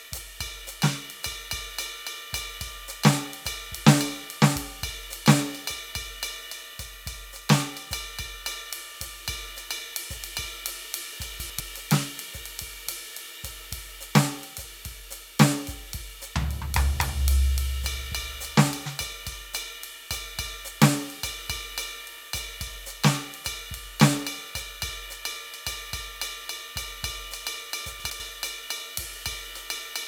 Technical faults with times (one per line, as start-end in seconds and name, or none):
11.40-11.60 chunks out of order
28.00-28.20 chunks out of order